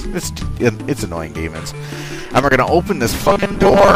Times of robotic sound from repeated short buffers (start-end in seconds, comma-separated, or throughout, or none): 3.24-3.95